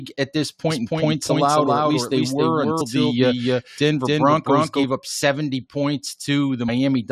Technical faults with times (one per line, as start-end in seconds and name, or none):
0.70-4.84 doubled audio track
2.80 compressed frames skipped
6.68 compressed frames skipped